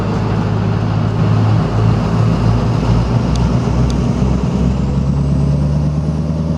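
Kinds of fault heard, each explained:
Doubled audio track: From 1.19 s to 4.73 s a second full-band copy of the sound runs about half a second behind the first, at roughly equal loudness, so every onset is heard twice. The late copy carries no decay or added room colour, and it starts and stops abruptly at those two points. The likely cause is the same signal being captured again through a slower path, or an edit leaving two copies out of step.
Compressed frames skipped: At 4.89 s the audio jumps forward by about 50 ms, which fits two frames of roughly 26 ms each going unplayed, either missing from the file or rejected by the decoder as damaged. The jump is followed immediately by sound from slightly further ahead in time.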